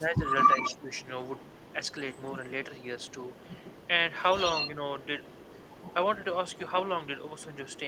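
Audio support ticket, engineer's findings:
0–0.9 s: speech dips, level falling about 10 dB, roughly 0.7 s affected. Likely speech suppressed in double talk: the echo canceller couldn't separate the talker from far-end echo and attenuated both.

0.44 s to end: faint delayed copy of the speech trailing 138 ms behind, roughly 10 dB down. Likely echo leak: the loudspeaker side's canceller didn't fully remove mic pickup and returned it.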